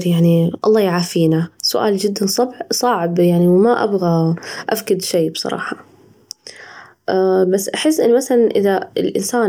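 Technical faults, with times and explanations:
No technical faults can be heard anywhere in the speech; the signal stays continuous and steady in level, with no breaks, distortion, or unexpected changes.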